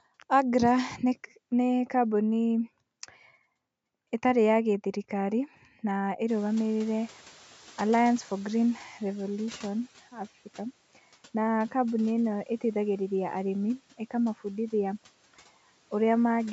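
At 6.28 s the noise suppressor is caught up short as the room noise jumps by about 24 dB around 6.5 s. The noise comes through with less reduction, then sinks by about 10 dB as its estimate adapts over 3.69 s, to 9.97 s. The spectrogram shows a broadband band, capped at 8 kHz, fading gradually.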